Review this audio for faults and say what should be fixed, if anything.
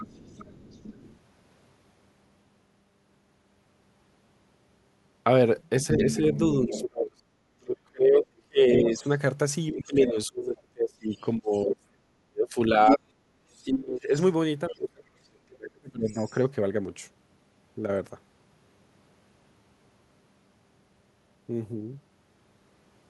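The other side's voice is leaking through at 0.0–1.18 s, 5.58–6.89 s, 8.22–10.09 s, 11.16–11.22 s, 12.88–14.89 s and 16.08–16.4 s. It ranges from a faint trace to roughly as loud as the talker around 13–15 s. This is likely loudspeaker playback reaching the mic that the echo canceller didn't fully remove. A better-tuned canceller, or a headset, would stop it.

From 5.97 to 16.33 s the talker's speech is suppressed in double talk. Their level keeps dipping, by something like 35 dB at worst, across about seven seconds in total, as the far end talks over them. The likely cause is the canceller failing to tell near speech from echo and ducking both. A canceller with proper double-talk detection would fix it.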